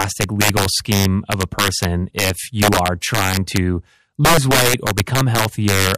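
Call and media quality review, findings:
Integer overflow throughout the speech: violent cracks on loud peaks, sharper than clipping. Gain stage driven about 11 dB over, with around 2% of samples wrapping to the opposite sign instead of limiting.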